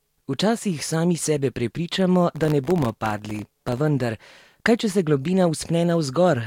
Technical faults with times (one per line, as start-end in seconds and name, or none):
2.32-3.78 processor overload crackle